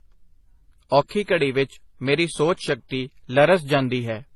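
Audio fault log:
Throughout, transcoding between lossy codecs: nothing above 12.6 kHz, and two layers of artefact, swirly smearing plus coarse metallic grain. This points to a low-rate MP3 encode (near 32 kbit/s) likely re-encoded as HE-AAC (near 24 kbit/s), which spends bits copying the earlier damage.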